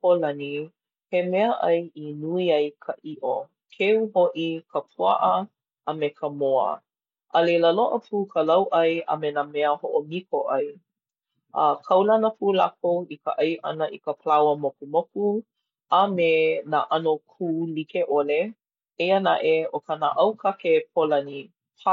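No technical faults can be heard anywhere in the speech.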